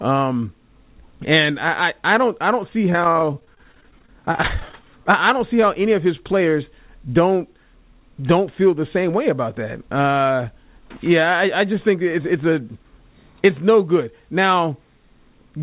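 Repeated packet loss (robotic sound) runs from 2.9 to 4.84 s, starting just after "don't I don't see" and ending before "I don't see". Dozens of short holes open one after another, the longest about 40 ms. Each is patched by stretching the last bit of sound forward, so about a quarter of this span is concealment: roughly 480 ms of filled sound, with 370 ms of the original missing. The result is choppy, with pieces dropping out.

A jitter buffer speed-up follows from 8.96 to 9.56 s, right after "don't feel the". Too much audio had built up in the receiver's buffer, so it trimmed it back by cutting out short pitch-period-sized slices in quick succession, a few tens of milliseconds in total. The sound runs at about 106% speed with the pitch unchanged, giving a brief hurried feel. Throughout, nothing reaches above 4 kHz, which fits a narrowband call codec.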